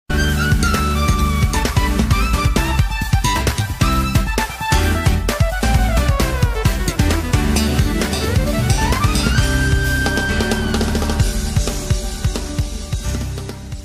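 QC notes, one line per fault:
11.26–11.29 s, repeated frames: one block of about 23 ms plays twice, which points to a single compressed frame being duplicated. The result is a brief stutter. Unlike a click or dropout, nothing is lost: the sound repeats and the clip runs 23 ms longer.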